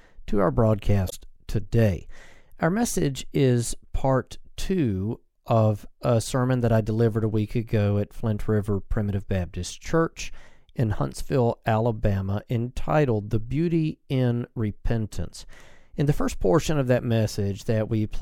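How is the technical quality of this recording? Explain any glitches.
The recording has one glitch: a brief glitch from about 1.08 to 1.13 s. It comes from damaged data in a compressed stream. Corrupted bytes there made the decoder misread frames and lose sync until it locked onto the next valid frame header.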